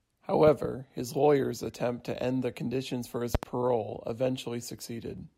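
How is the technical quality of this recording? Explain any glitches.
The speech recording has three audible glitches: two double pops and one brief skip.

Loud pop: between 0.47 and 0.67 s, and again between 3.35 and 3.45 s, there is a pair of sharp pops each time, about 10 dB and then about 20 dB above the speech. They were likely caused by voltage steps from a plug, switch or static discharge. On a waveform they show as tall spikes. On a spectrogram they show as thin full-band vertical lines.

Compressed frames skipped: from 1.68 to 1.71 s compressed frames were skipped, so the speech jumps ahead by about 20 ms. It appears as a slight discontinuity in the spectrogram.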